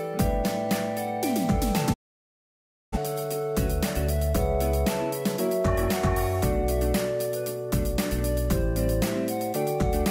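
A digital broadcast dropout cuts the audio from 1.92 s to 2.98 s. The sound fades out over about 20 ms and stays silent for roughly 0.98 s before returning mid-programme. The receiver muted while frames were missing or failing their checks, a gap that fits a run of about two dozen lost frames. The content sent during that stretch is gone.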